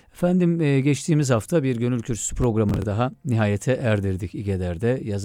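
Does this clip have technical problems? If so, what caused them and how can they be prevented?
Yes. From 2.44 to 2.84 s, between "hafta bir gönül kürsüsü" and "daha nihayete", a gritty processor overload crackle tears through the speech. The processor missed several buffer deadlines, with buffers of around 10 ms, replaying stale audio with hard edges. Reducing processing load or enlarging buffers prevents it.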